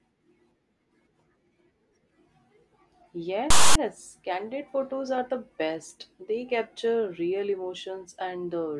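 A speech recording, interrupted from 3.50 to 3.75 s by a quarter-second of file tags played as audio. Text metadata is being decoded as samples, producing a loud, rasping burst offset to one side of zero, starting and stopping with hard edges.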